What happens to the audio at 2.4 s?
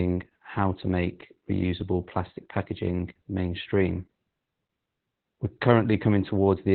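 At 2.4 s the speech carries Opus voice compression, as it does for the whole clip. The codec runs in its SILK linear-prediction mode and has narrowed the band to roughly 4 kHz. It also codes the excitation coarsely. The damage is heavy. The voice sounds muffled and hoarse, with a slightly robotic edge. That degree of loss points to a very low bitrate, around 8 kbps.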